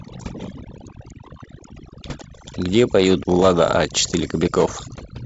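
Speech runs through wideband telephone coding, with nothing above about 7.8 kHz, and carries overdone noise removal from start to finish. The suppressor, set too aggressively, shuts individual frequency bands whenever they sit near its noise estimate. Pauses collapse to near silence with twinkling specks, and the quieter parts of the voice are stripped away. On a spectrogram, the background becomes black gaps scattered with isolated bright dots, and the voice's fainter harmonics are broken into patchy fragments.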